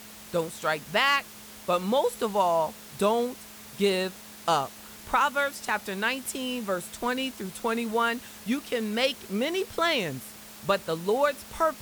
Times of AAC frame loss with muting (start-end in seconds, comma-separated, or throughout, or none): none